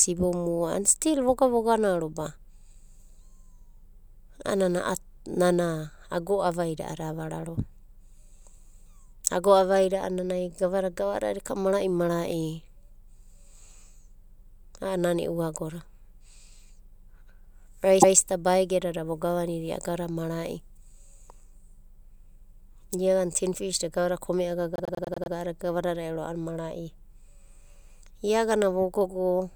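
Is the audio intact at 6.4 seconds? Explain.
Yes, the speech at 6.4 seconds plays through cleanly, with no dropout, click, distortion or other fault to be heard at that moment.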